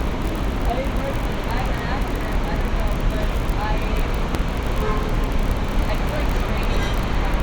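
Three small skips occur, at 0.39 s, 4.35 s and 5.34 s. Each is an overlap between stream segments, which fits segments about 1 s long. Adjacent segments claimed the same few milliseconds, so that stretch was cut away. The waveform jumps, heard as a tiny skip.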